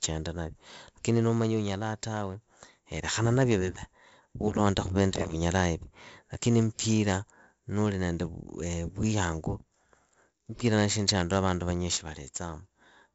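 Right from the start and all the way through, the speech carries heavy 4-bit ADPCM compression damage: a gritty hiss riding every loud syllable and roughened consonant attacks where the adaptive step size can't keep up. Nothing reaches above 7.7 kHz, which fits roughly 64 kbps coding.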